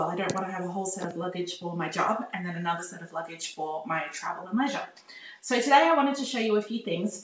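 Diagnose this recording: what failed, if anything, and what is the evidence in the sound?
Nothing failed; no stage in the chain shows an audible fault.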